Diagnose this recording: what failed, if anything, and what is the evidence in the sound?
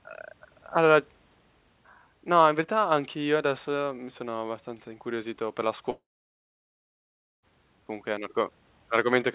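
Likely a long network dropout: after "abbastanza incuriosito per la" at 5.9 s, the receiver stretches the last sound into a brief fading buzz. About 1.4 s of silence follows, until "comunque è un" resumes at 7.45 s, with 1.5 s lost. The waveform shows a flat line, and the spectrogram a blank gap below the call path's 4 kHz band edge.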